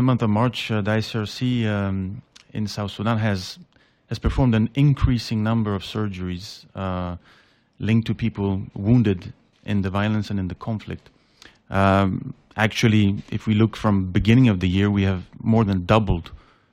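No technical faults can be heard anywhere in this audio. There is no moment in the sound that calls for a timestamp or an explanation.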